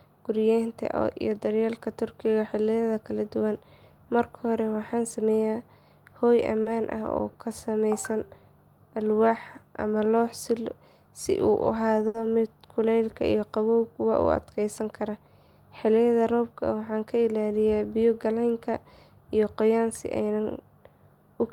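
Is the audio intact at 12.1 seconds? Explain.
No. A late packet left the jitter buffer empty, so from 12.07 to 12.16 s there is a short stall: the receiver held the last sound for about 70 ms until the packet arrived. Nothing is lost, but that sound drags, with a faint buzz or dip, and everything after plays 70 ms later.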